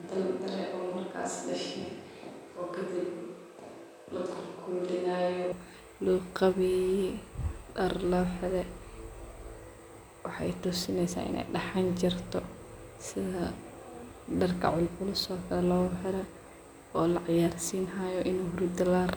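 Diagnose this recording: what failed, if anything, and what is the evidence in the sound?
Switch to a distant microphone, from the start to 5.52 s: the voice sounds roomy and hollow, thin in the bass, roughly 5 dB quieter, with room noise about 30 dB below the speech, then turns abruptly close. The close microphone's feed likely dropped in the analogue wiring, leaving a farther pickup.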